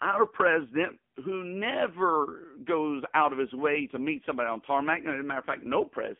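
AMR narrowband mobile codec throughout: nothing above 3.5 kHz survives, and heavy buzzy, synthetic coding of the speech points to a low AMR-NB rate near 6.7 kbps.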